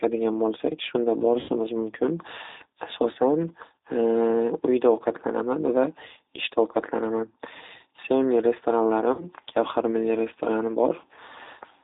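Throughout, the speech is band-limited to about 300 Hz to 3.7 kHz and sounds rough and synthetic. That fits the G.729 codec at 8 kbit/s. At 1.40 s and again at 9.13 s, VoIP packet loss is concealed by the speech codec. The gaps last 90 ms and 60 ms. The decoder stretches the last sound into a fading buzzy tone or coloured noise, and the speech stays weak briefly after each gap.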